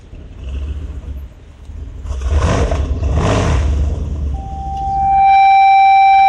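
At 4.34 s a loudspeaker feedback squeal kicks in and runs right to the end of the clip. A mic is hearing the speaker it feeds, and around 781 Hz the loop gain tipped past one, so that frequency keeps feeding itself. You hear a single steady tone swell up over about a second into a howl that ends up sitting well above the rest of the sound, and it never gets cut off before the audio stops.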